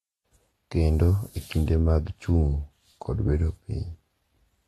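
Throughout the speech, a low-bitrate encoder, likely AAC compression at something like 32 kbps, has discarded everything above 12.4 kHz and coarsely quantised what remains. The result is plainly dull and smeared, with a warbling, fizzy texture on sibilants and sustained sounds.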